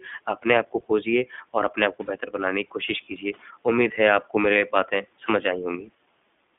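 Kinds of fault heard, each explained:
iLBC codec: The whole clip of speech has been through iLBC, a narrowband VoIP codec running here at 15.2 kbps with 20 ms frames. The line band sits at roughly 200 Hz to 3.5 kHz, so there's no air or sibilant sparkle up top. Each frame's excitation is coded on its own, and you can plainly hear the result: a slightly rough, synthetic edge on the speech throughout.
Lost iLBC frames: Two single frames go missing, each 20 ms, at about 2.06 s and 5.26 s. In each gap the decoder covers the hole by repeating the last pitch cycle with some noise mixed in. That gives a brief held, faintly buzzy vowel-like smear. Since iLBC frames don't depend on their neighbours, the speech snaps straight back right after each one.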